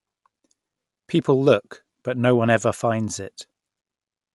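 A speech clip with plainly audible codec damage the whole way through: the band stops dead at 11.5 kHz, and the upper range sounds breathy and grainy where noise fills in for the detail the codec discarded. That's likely Bluetooth LC3 compression, consistent with 10 ms frames around 48 kbps.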